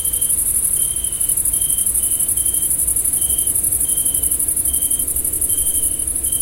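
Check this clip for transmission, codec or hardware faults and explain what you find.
Nothing stood out on listening to this sound.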